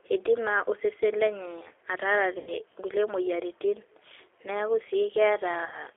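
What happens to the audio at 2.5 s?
From 2.38 to 2.54 s, VoIP packet loss concealed by the speech codec. About 90 ms of audio went missing, which fits three lost packets. The decoder repeats its last pitch and filter at falling gain, giving a fading buzzy or noisy smear. The sound stays weak or distorted briefly after. Underneath, the G.729 codec limits the band to 200 Hz to 3.5 kHz and adds plainly audible roughness.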